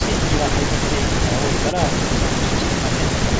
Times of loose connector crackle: none

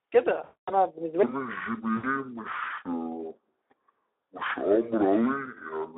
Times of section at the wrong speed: 1.23-5.98

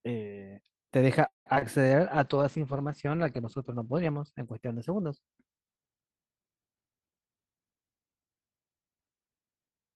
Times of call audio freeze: 1.27-1.47

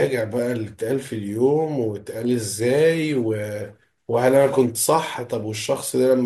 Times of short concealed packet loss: none

